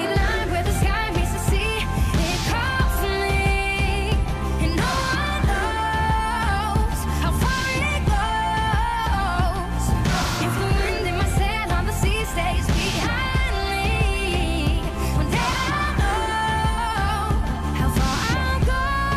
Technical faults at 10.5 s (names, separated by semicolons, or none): none